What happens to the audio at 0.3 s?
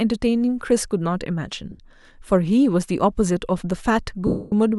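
Nothing goes wrong at 0.3 s; the speech plays through that moment intact, with no fault to be heard.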